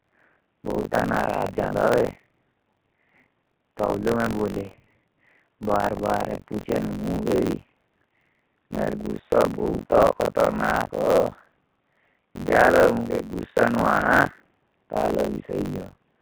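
Across the whole clip the speech passes through a G.729 codec, consistent with the 8 kbit/s VoIP variant. It rebuilds each short frame from a vocal tract filter, a pitch predictor and a few pulses, so the speech sounds plainly rough and synthetic, and nothing above 4 kHz survives.

Buffer tearing is also present for the full duration. The writer and the hardware reader of a ring buffer have drifted and cross every period, leaving roughly two fifths of each buffer filled with audio from one lap earlier, some 40 ms old, with hard joins on both sides. This produces a continuous robotic buzz at 46.9 Hz whenever speech is present, which fits a 1024-sample buffer.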